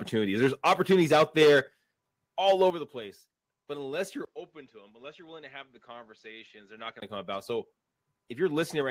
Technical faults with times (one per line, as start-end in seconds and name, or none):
0.42-1.60 microphone overload
0.69 microphone volume stepped down
1.68 microphone volume stepped down
2.46-2.69 microphone overload
2.70 microphone volume stepped down
5.76 microphone volume stepped up
6.78 microphone volume stepped up